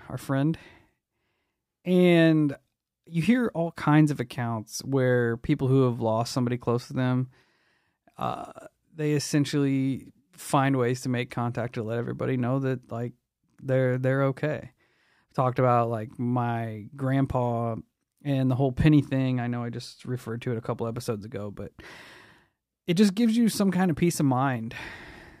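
There are no technical faults to describe anywhere in the recording.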